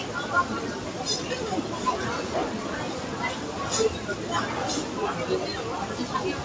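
Throughout, a noise suppressor applied to these sounds treats sustained tones and ambience as noise, dipping them about 5 dB so tails sink and the level pumps, within a band that stops at 8 kHz, as G.722 would leave it.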